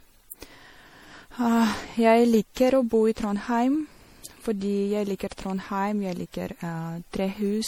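All the way through, the speech has that swirly, hollow, smeared quality, with consonant attacks blurred. It's likely generation loss: around seven passes through an MP3 codec at something like 64 kbit/s, each re-quantising on a shifted frame grid so the noise and spectral holes stack up.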